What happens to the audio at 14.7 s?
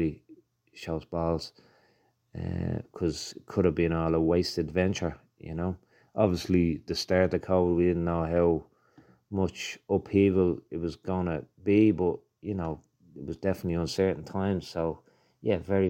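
A drift correction step runs from 13.96 s to the end at 15.90 s. The speech plays about 5.7% fast and about 97 cents sharp, nearly a semitone, likely because clock-matching software abruptly raised the playback rate to drain its buffer.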